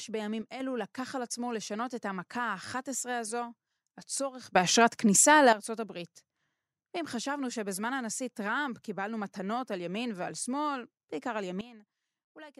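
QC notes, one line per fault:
0.42–0.60 s, sudden gain jump: a gain step likely applied with no ramp drops the speech and background together by about 6 dB, abruptly.
4.55–5.53 s, sudden gain jump: gain likely switched between adjacent samples, so speech and noise floor leap up about 12 dB at once, then fall back.
11.61–12.59 s, sudden gain jump: an unramped gain change likely cuts level about 15 dB in one step, taking speech and background down together to the end.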